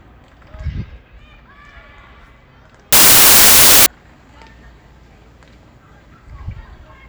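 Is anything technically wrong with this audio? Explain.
Yes, there's one clear fault. From about 2.93 s to 3.86 s, just under a second, the audio turns into a burst of loud broadband noise: samples built from the wrong bytes. The reader is assembling each sample incorrectly, off by a byte, with the byte order swapped, or with the wrong alignment, so the fast-jittering low-order bits end up as the big part of every value. What you hear is harsh, full-band hiss in place of the actual sound.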